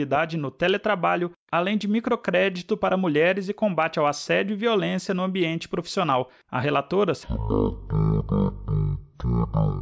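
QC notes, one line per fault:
7.23–9.81 s, wrong sample rate: the sound drops to 0.363 times its speed and about 17.6 semitones lower in pitch, so everything drags low and slow. This fits 44.1 kHz material being played at 16 kHz with no conversion, which slows speed and pitch together. On a spectrogram, all content in this section is squeezed downward and stretched in time, with an empty band above. On the waveform, the same events look wider and more drawn out.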